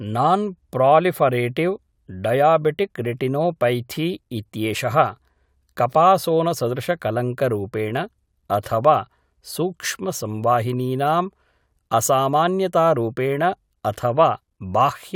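No audible technical faults.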